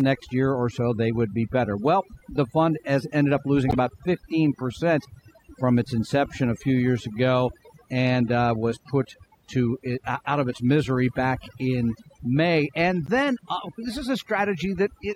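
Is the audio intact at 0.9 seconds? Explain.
No. At 0.9 seconds the speech carries overdone noise removal, present throughout the clip. A noise reducer set too strong cuts frequency bands near its noise estimate, taking quiet parts of the voice too. The background drops and breaks up into twinkling specks.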